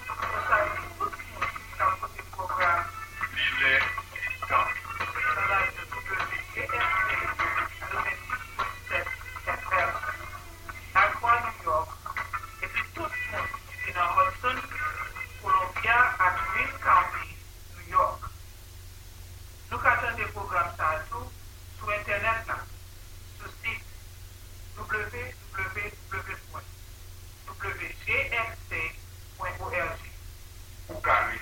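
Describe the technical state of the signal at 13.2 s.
At 13.2 s the signal is intact, with no dropout, distortion or other technical fault audible at that point.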